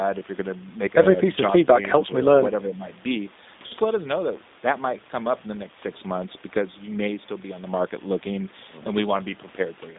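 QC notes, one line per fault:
throughout, G.729 codec: the 8 kbit/s speech codec limits the band to roughly 200 Hz to 3.7 kHz, leaving speech audibly rough, synthetic and dull.
2.07 to 2.15 s, speech suppressed in double talk: the speech dips by about 5 dB for roughly 70 ms, likely an echo canceller attenuating during overlapping talk.
3.67 to 3.74 s, VoIP packet loss concealed by the speech codec: about 40 ms is missing, which fits two lost packets, and the decoder extrapolates a fading fill, a buzzy tone or coloured noise, before recovering.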